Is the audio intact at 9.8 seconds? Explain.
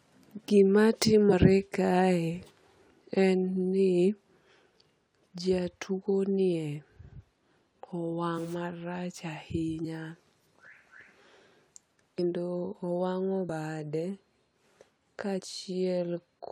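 No. At 9.83 s the decoder drops compressed frames, either missing from the file or rejected as damaged, so the speech jumps ahead by about a tenth of a second.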